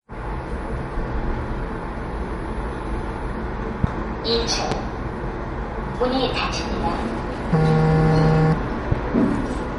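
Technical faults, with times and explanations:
Throughout, MP3 compression: The encoder was likely starved of bits, which fits a rate near 45 kbps. It cut everything above 11.1 kHz and dropped weak frequency lines unevenly from frame to frame. The result is plainly audible: dull treble with a watery, swirling texture and smeared attacks.
3.84 s, 4.72 s, 8.92 s, loud pop: Each time, a single sudden voltage pulse, likely from a switch, plug contact or static discharge, was added to the signal for about 26 ms. It is heard as a sharp pop roughly 15 dB above the sound, which continues underneath.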